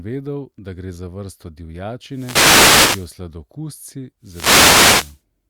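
Speech, hit twice by a wireless microphone noise hit: from 2.09 to 3.17 s, right after "da gre za vrsto", and again from 4.22 to 5.22 s. Each time the FM radio link fades as reflected signals cancel, so receiver noise swells into a swish of static over the voice. On a spectrogram each burst is a broadband wash of hiss over the harmonics, and the waveform shows a thickened noise floor around the speech.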